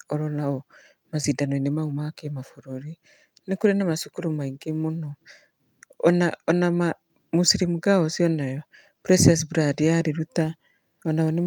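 A speech recording, with no technical faults to report. Nothing heard in the audio points to a problem in how it was captured, processed or delivered.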